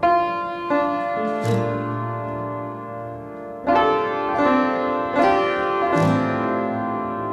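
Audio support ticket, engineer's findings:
No fault found in the music clip. Nothing audible requires further action on this ticket.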